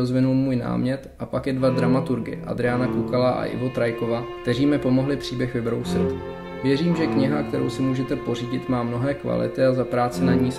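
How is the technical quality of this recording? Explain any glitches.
The technical quality is sound, with no glitches to explain.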